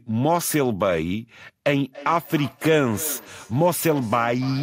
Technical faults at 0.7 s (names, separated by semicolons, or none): none